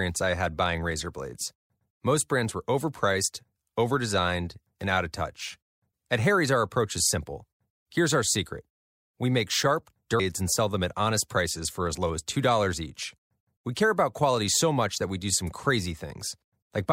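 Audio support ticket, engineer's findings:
Short glitch in the speech at 10.2 s, between "secret we make sharp" and "and sell them at". Damaged data in the compressed stream: bytes lost or corrupted at that point.

Mechanism: decoder misreads or rejects the affected frame, loses sync, then scans forward for the next valid frame header. The garbage decoded during resync is the glitch. Component: compressed file or stream transport, upstream of the decoder.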